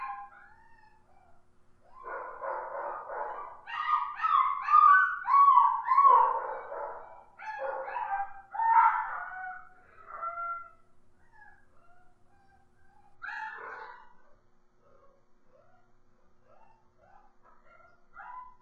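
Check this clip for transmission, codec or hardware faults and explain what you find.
One fault is present: a drop to a lower-bitrate stream near the end.

Adaptive stream at a lower bitrate, from 13.15 s to 18.62 s: the player switched to a much leaner encoding, apparently because the connection slowed. The quality changes suddenly, with no gap. The treble thins out and turns synthetic, and the codec artefacts grow, which fits a shift from mid-rate AAC to very low-rate HE-AAC, around 8 kbit/s, where the upper band is rebuilt rather than coded.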